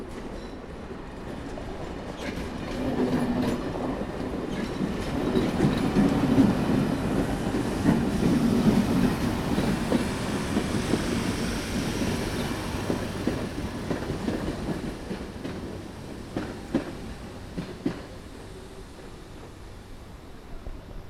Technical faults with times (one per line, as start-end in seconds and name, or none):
17.81 compressed frames skipped